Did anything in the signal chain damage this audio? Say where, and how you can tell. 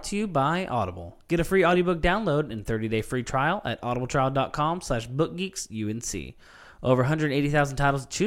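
No, none of the stages from capture to playback left any audible damage on this speech recording.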